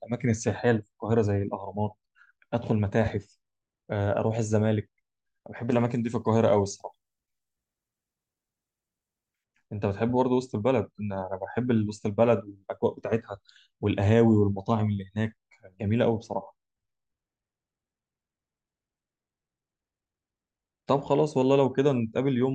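From 5.72 to 9.44 s, pre-emphasis is left on. The 50 µs treble boost lacks its matching cut. Highs sit about 10 dB up at 10 kHz. Speech turns thin and sibilant.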